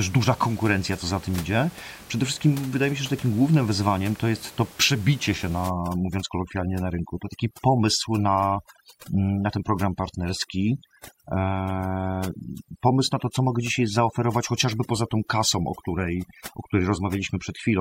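From 5.69 s to the end, overdone noise removal sets in: the noise reducer is cut too hard against room noise sitting about 21 dB below the speech, so it drops quiet frequency bands near that level, leaving a lowered background broken into twinkling specks.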